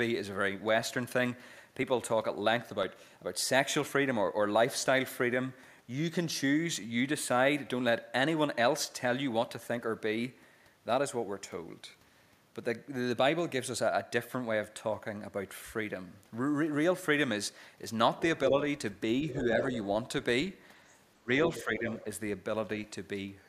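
A speech recording with three kinds of fault. From 0.82 to 6.83 s there are periodic USB or driver dropouts: about seven tiny ticks, exactly one second apart, each skipping roughly half a millisecond of audio rather than filling it with silence. Their metronomic spacing and the way they sound only over signal set them apart from random network packet loss or mouth clicks, which fall irregularly and last longer. The regular stall fits a background task interrupting the audio path on a fixed timer. Later, the other side's voice leaking through appears as short scraps: 19.30 to 19.43 s at about 15 dB below the talker, 19.61 to 19.78 s at about 5 dB below, then 21.55 to 21.65 s and 21.91 to 22.05 s, both at about 15 dB below. These are likely residual echo the canceller missed. They arrive in chopped fragments rather than as a steady second talker in the room, which is what distinguishes them from ordinary background chatter. 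Speech suppressed in double talk follows. At 21.18 to 21.29 s the talker's level drops sharply, by around 25 dB over about a tenth of a second. From 21.49 to 21.87 s it dips more gently, by around 5 dB. This is likely the canceller ducking both sides while they overlap. Unlike the dropouts, nothing is skipped: the level sinks and recovers, and it coincides with the leaked fragment at 21.55 s.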